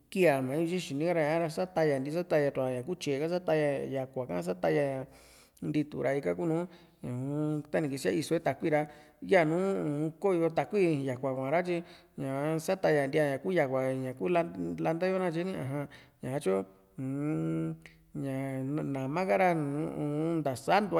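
Speech recording, with nothing technically wrong to report at any point.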